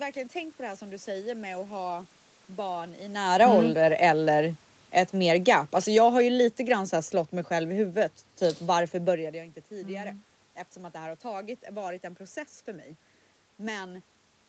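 Automatic gain falling, from 5.14 to 6.89 s, is the fault in this speech clip. The automatic gain control judged the incoming level too hot or its background noise too strong and backed its gain off over those 1.75 s by about 4 dB, so the speech and the room noise behind it sink together. The level changes near 3 s and 9 s, by contrast, come from the talker shifting relative to the microphone, and the top end stopping at 8 kHz reflects the call codec's bandwidth.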